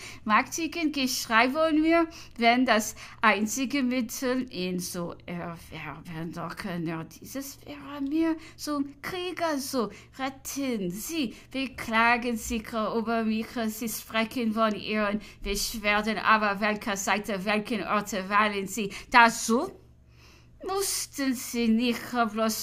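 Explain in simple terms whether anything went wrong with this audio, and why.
Nothing went wrong here.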